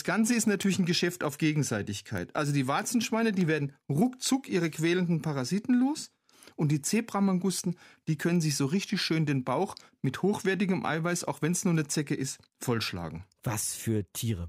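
From 0.17 s to 14.38 s the speech carries word clock ticks: sharp clicks arriving at a steady pace of roughly seven per second, about a hundred in all. The receiving device was running on its own clock, drifting from the sender's by something on the order of 150 ppm. At each slip a single sample was dropped or doubled. That strict regularity separates it from random crackle or dropouts, which come at irregular moments.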